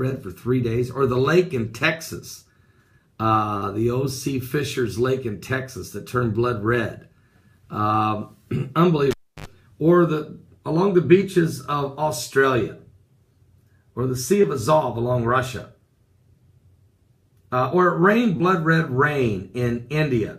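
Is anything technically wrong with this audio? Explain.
Yes. There are two kinds of fault.

Short concealed packet loss occurs at 3.57 to 3.64 s (about 40 ms missing), 14.42 to 14.45 s and 18.37 to 18.42 s (about 20 ms each). Data arrived too late for the decoder, which bridged each gap by extending the preceding sound before blending back, leaving a brief smear or wobble.

The cable was pulled and plugged in between 9.11 and 9.47 s. Breaking the live connection causes a pop, then about 0.31 s of near silence. Partial contact while reinserting adds 70 ms of 50 Hz mains buzz, and a second pop follows as the sound returns.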